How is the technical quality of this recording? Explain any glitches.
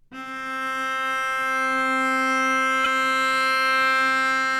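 There is one glitch: a short stretch of repeated frames at 2.84 to 2.89 s. A 52 ms block of the audio is played once and then immediately played again, producing a brief stutter in which the same fraction of a second sounds twice in a row. The repeated block length fits two compressed frames of about 26 ms each being written or sent a second time, so the decoder simply replays them. The duplicate adds 52 ms to the audio's running time.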